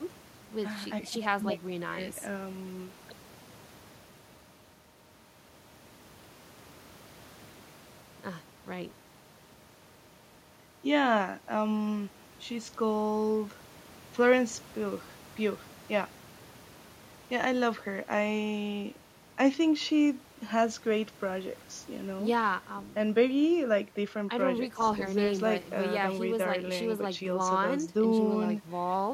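Nothing in the signal points to a technical fault at any moment of the recording.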